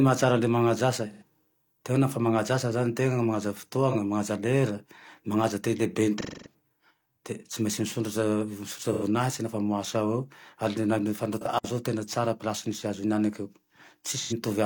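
AAC frame loss with concealment hits the speech at 1.12–1.23 s, 3.90–3.96 s (just after "asa zane tena manaja"), 6.18–6.54 s (after "manaja te"), 8.93–9.03 s and 11.41–11.46 s. The decoder papers over missing frames by reusing the last good spectrum, so each gap sounds smeared, noisy or phasey. On a spectrogram, harmonics blur into a flat, noisy block. The 6.18 s patch is the longest, about 256 ms, which fits several consecutive lost frames.

A digital wireless dropout follows at 11.58–11.64 s. The receiver lost too much data and muted for 60 ms. It is heard as a clean hole with no noise burst on either side, and the waveform shows a near-flat gap with tiny ramps at its edges.

One more AAC frame loss with concealment lands at 14.18–14.33 s. It sounds like the same brief smeared, noisy patch, about 85 ms of concealed audio in place of the lost data.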